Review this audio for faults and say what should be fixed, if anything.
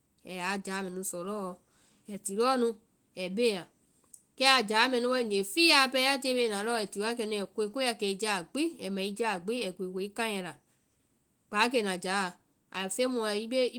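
Nothing needs fixing: the signal shows no faults, and the Opus voice compression it carries sounds like the full-band hybrid mode at a moderate rate around 20 kbps, with content reaching up to about 20.2 kHz and only light coding texture.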